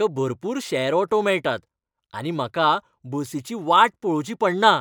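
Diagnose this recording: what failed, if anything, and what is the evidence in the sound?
The sample-rate conversion stage failed, with imaging from linear upsampling throughout. The top of the speech band is dulled, and a faint metallic shimmer rides on sibilants. Mirror images fill 12 to 24 kHz, roughly 40 dB down. Straight-line interpolation points to a 24 kHz source raised to 44.1 kHz.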